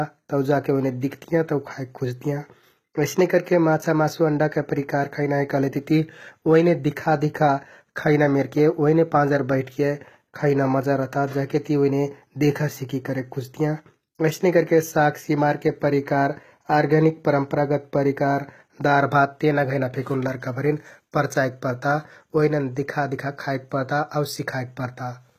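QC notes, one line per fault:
Throughout: HE-AAC compression, likely the cause of the plainly audible coding damage across this speech clip. The treble sounds synthetic rather than captured: above the crossover the upper band appears rebuilt from copied lower bands under a coarse envelope, so its harmonics no longer line up with those below, and s sounds come out gritty and metallic. Nothing remains above 14.9 kHz, and the degree of damage fits a bitrate around 20 kbps.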